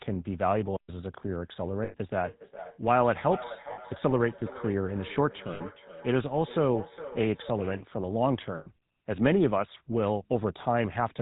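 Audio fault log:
Throughout: GSM full-rate codec. The speech has a buzzy, gravelly roughness and nothing above 4 kHz, which fits the 13 kbps full-rate coder. It models the vocal tract and drives it with sparse, regularly spaced pulses, so fine detail and breath are replaced by a coarse buzz.
1.84–1.95 s, 3.72–3.79 s, 5.54–5.61 s, 8.58–8.67 s: lost GSM frames. Dropouts lasting 100, 60, 60 and 80 ms, which fits runs of 20 ms frames, come out as a held, rough metallic ring. The decoder repeats the last good frame's settings at falling level instead of going silent.
2.23–7.89 s: feedback echo between two devices. Speech comes round again at an interval of around 0.4 s, thinner and more ringing on each pass, peaking at about 13 dB below the direct speech. A second device in the room replays the call into the first device's microphone, and neither device's echo canceller removes the other's playback.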